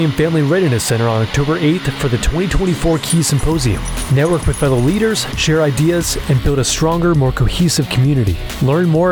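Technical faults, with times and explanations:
0.0–6.38 s: timecode bleed. Linear timecode at 25 frames per second is leaking in from a neighbouring track or cable. Its square wave flips between tones near 1 kHz and 2 kHz, heard as a steady chirping warble roughly 20 dB under the sound until it stops.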